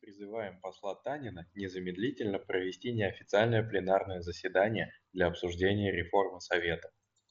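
At 5.69 s the link between headset and phone dropped a brief stretch of voice data, about 7.5 ms, which fits a single lost packet. This is concealed Bluetooth headset packet loss: the phone filled the hole by repeating the closest-matching piece of the speech just before it. With only one packet missing, the patch is nearly hidden over the light grain of the mSBC headset codec.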